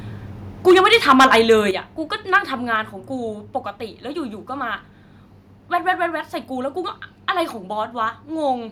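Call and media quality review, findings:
Microphone overload, 0.67–1.52 s and 2.34–2.37 s. Harsh, crackly edge on loud syllables. Peaks about 10 dB, then about 2 dB past full scale. Around one sample in twenty flattened in the first span. Likely cause: mic input gain set too high, converter clipping.

Microphone volume stepped down at 0.71 s, 1.71 s, 2.76 s. Sudden level drops of about 2 dB, 6 dB, 2 dB. Speech and background fall together. Each follows a clipped peak. Likely call software's automatic gain control cutting device input.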